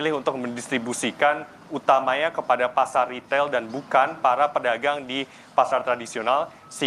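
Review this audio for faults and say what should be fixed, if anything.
No faults; nothing to fix.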